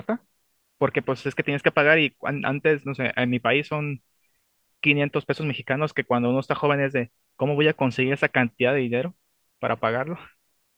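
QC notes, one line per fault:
No technical faults are audible anywhere in the speech signal.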